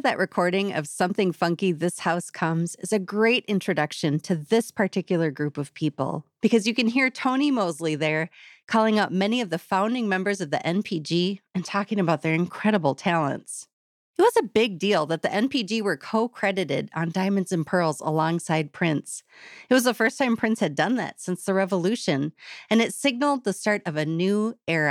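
No technical faults are audible anywhere in the recording.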